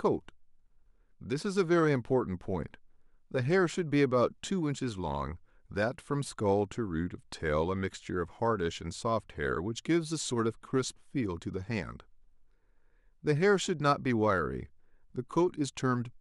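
A recording of speech, with no technical faults to be heard anywhere in it. Nothing in the audio calls for a timestamp or a cause.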